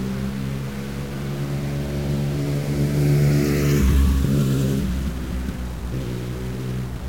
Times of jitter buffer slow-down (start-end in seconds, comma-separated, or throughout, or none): none